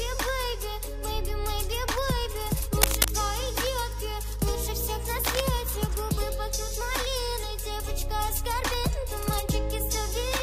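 Two bursts of cable scratch noise, from 2.82 to 3.11 s and from 5.25 to 5.41 s, likely from a worn lead or connector shifting. The first rises above the sound and the second sits somewhat beneath it. Both rasp briefly, appearing as ragged broadband smears on a spectrogram and dense spiky clusters in the waveform.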